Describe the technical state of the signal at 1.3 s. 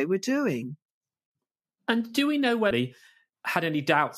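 At 1.3 s the speech signal is intact, with no audible fault at that moment.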